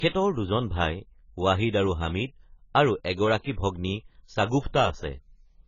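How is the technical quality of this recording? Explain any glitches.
The recording is heavily degraded by lossy coding, with two brief smearing glitches.

Throughout the speech there is AAC compression damage, likely from AAC-LC at a very low bitrate. Nothing is left above 7 kHz, which fits a rate around 16 kbps. At that rate the coder starves many frequency bands and blurs the rest. The speech sounds dull and muffled. Sibilants turn fizzy, and held sounds take on a watery warble.

Pre-echo appears twice after "আৰু হামিদ আৰু". The first spans 3.40 to 3.44 s, about 39 ms. The second spans 3.52 to 3.57 s, about 53 ms. Each time a sharp onset sits late in a coding block. The block's quantisation noise, sized for the loud onset, spills into the quiet gap before it. A short hiss leads each attack, and the attack itself sounds softened and smeared.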